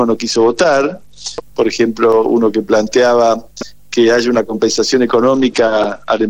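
Two Bluetooth SBC bit pool drops here, from 0.31 to 1.42 s and again from 5.33 s right to the end. Each time the top end goes dull and a gritty haze comes up, which fits the link falling back from bit pool 28 to about 10, near 84 kbps. With that few bits the upper sub-bands get starved and everything left is coarsely quantised, so the treble dulls and grain takes its place.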